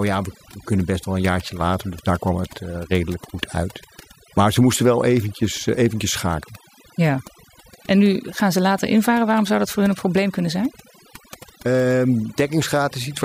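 Overdone noise removal runs through the whole speech clip: a noise reduction stage set far too aggressively pulls individual frequency bands down or out whenever they sit near its noise estimate, leaving near-silent gaps with twinkling specks, where quieter speech detail was stripped away too.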